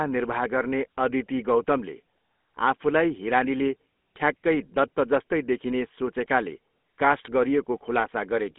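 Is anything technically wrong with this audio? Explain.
Yes. Throughout, the speech has passed through a GSM full-rate codec, which models the vocal tract and drives it with a coarse, regularly spaced pulse excitation at a rate that fits about 13 kbps. The line keeps only about 200 Hz to 3.5 kHz, so the voice sounds narrow and plainly buzzy and gravelly.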